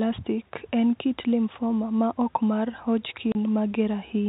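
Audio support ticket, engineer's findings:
Packet loss filled with silence at 3.32 to 3.35 s: a 30 ms hole with hard edges. Probable component: network transport or receiver jitter buffer, with no concealment. Lost audio replaced by silence. The gap length fits three consecutive 10 ms packets dropped. The G.711 telephone coding path caps the band at 4 kHz, with faint level-following quantisation noise.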